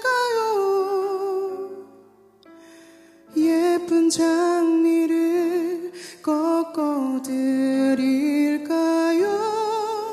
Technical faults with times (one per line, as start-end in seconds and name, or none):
none